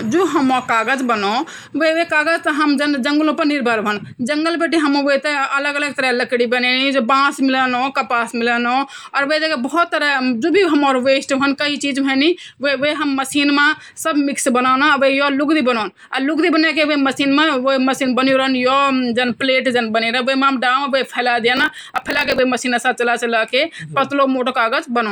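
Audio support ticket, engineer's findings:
Block size mismatch (truncated), 21.55–22.40 s. Speech runs about 1.12x fast at roughly normal pitch, with a buzz at 46.9 Hz. Probable component: buffer handoff between two processing stages. Upstream writes longer blocks than downstream reads, so each block's tail is discarded. The buzz rate fits a 1024-sample read, and the 1.12 speed-up reflects the write-to-read size ratio.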